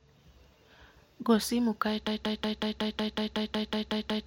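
At 2.07 s, right after "simo kae", the speech locks into a broken-record loop. A fragment of about 185 ms repeats exactly, back to back, twelve times, until the clip ends. The likely cause is a stalled player or stream resending its last buffer. The speech that should follow is lost.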